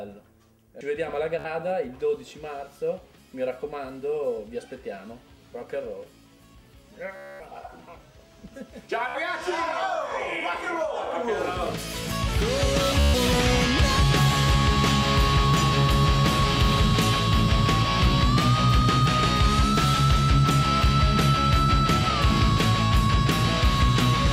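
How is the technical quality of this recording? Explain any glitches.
The recording has four Bluetooth stutter glitches, at 1.39–1.46 s, 7.16–7.41 s, 9.09–9.19 s and 13.00–13.15 s. Packets arrived late or not at all, so the receiver kept replaying its last short buffer. That gives a buzzing, machine-gun repeat. Playback then jumps ahead, skipping about 56, 238, 56 and 140 ms of sound respectively.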